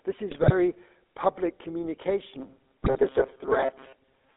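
Throughout the clip the speech has passed through the GSM full-rate codec. The coder keeps only a crude model of the vocal tract, excited by a sparse train of regular pulses, and the line carries roughly 250 Hz to 3.6 kHz. The damage is plainly audible: a thin, band-limited voice with a buzzy, gravelly roughness on every voiced stretch, which fits the 13 kbps full-rate coder.

From 0.30 to 0.53 s, and again from 2.82 to 3.01 s, GSM bit errors corrupt the decoder's filter, pitch and gain parameters. The error rate is about 2 percent in the first burst and about 1.7 percent in the second, enough to spoil a run of consecutive frames each time. In both bursts the spectrum lurches and the level jumps frame to frame, so the voice briefly breaks into squawks, pops and a gargling smear before clean decoding resumes.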